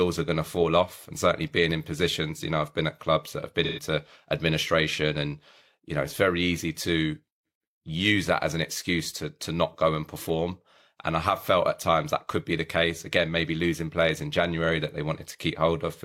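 Around 3.64 to 3.83 s, just after "at clubs that have", there's AAC frame loss with concealment: 128 ms refilled from the last good spectrum, leaving a brief smeared patch.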